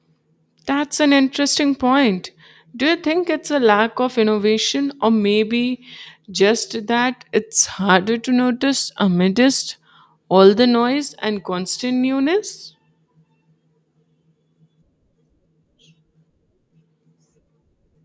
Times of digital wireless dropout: none

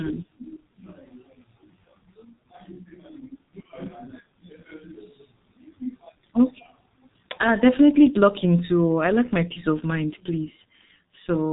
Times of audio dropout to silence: none

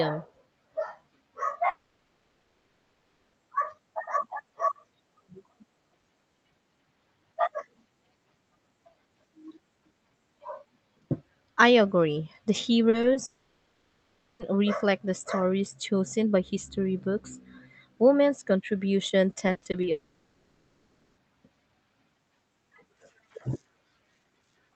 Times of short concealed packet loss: 12.89-13.17

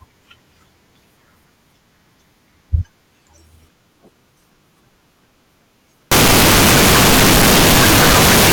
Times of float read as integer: 6.11-8.53

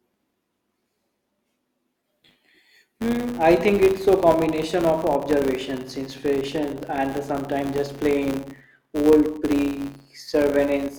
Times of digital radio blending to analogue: none

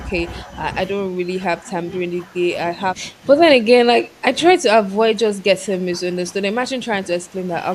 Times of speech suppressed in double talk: 0.08-0.57, 1.02-3.28, 3.59-7.66

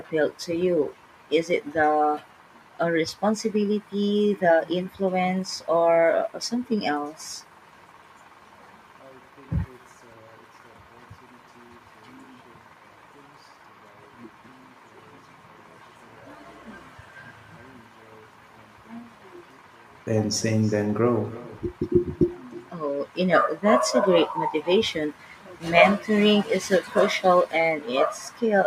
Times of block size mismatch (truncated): none

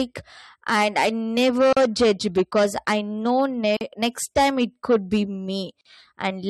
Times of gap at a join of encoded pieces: 1.73-1.77, 3.77-3.81, 5.81-5.85

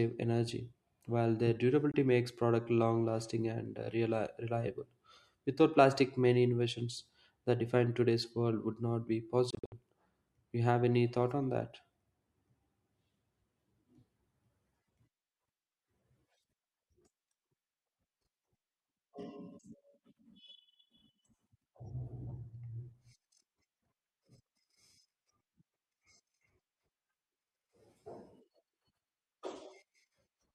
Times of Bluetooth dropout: 1.92-1.94, 9.50-9.72

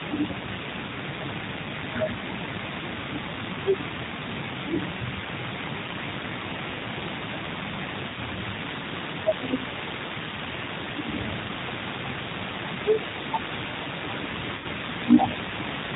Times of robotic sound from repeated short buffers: none

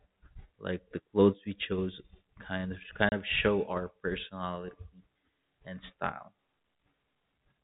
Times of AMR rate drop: none

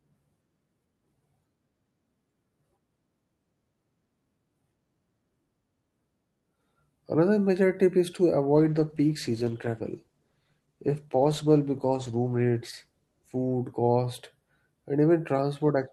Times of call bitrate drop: 8.56-13.47

